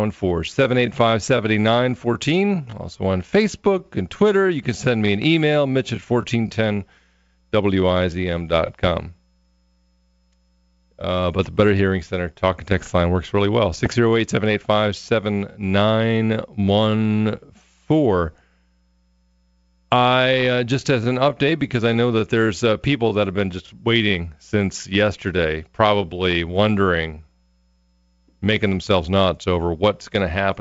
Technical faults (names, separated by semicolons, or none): bit errors on an ADPCM link